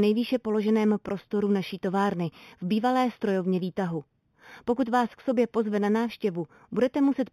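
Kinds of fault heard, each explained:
Imaging from linear upsampling: the speech was raised in rate by straight-line interpolation between samples, which points to an 8 kHz original brought up to 48 kHz. The weak filtering dulls the top of the band and leaves a faint mirrored copy between 4 and 8 kHz, about 30 dB down, heard as a light metallic shimmer on sibilants.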